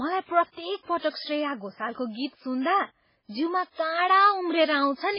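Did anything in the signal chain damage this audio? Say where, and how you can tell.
Yes. At the codec stage, the speech is band-limited throughout, with nothing above 5.3 kHz, and heavily watery and swirly. This is likely MP3 compression at a very low bitrate, around 16 kbps. A spectrogram shows a hard ceiling and flickering, patchy weak bins.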